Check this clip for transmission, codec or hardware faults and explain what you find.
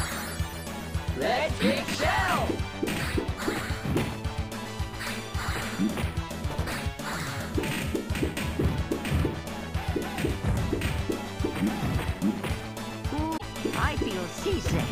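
One fault stands out, near the end. From 13.34 to 13.42 s, damaged data in a compressed stream makes the decoder misread frames and resync, giving a brief glitch: a break on the spectrogram and a jagged waveform break.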